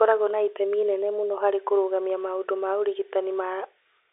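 No technical faults are audible.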